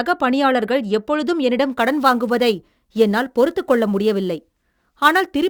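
From 1.72 s, after "பணியாளர்கள் எப்பொழுதும்", sample clock jitter sets in until the end. Samples land about 10 µs off time, adding a hiss that tracks louder, brighter speech.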